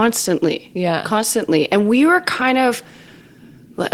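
No technical faults can be heard anywhere in this speech recording. At no point does the sound give away a moment where something in the signal chain went wrong.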